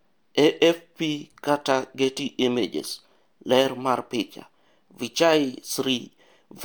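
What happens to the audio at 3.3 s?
Nothing goes wrong at 3.3 s: the speech carries straight through that moment with no dropout, click, distortion or other fault.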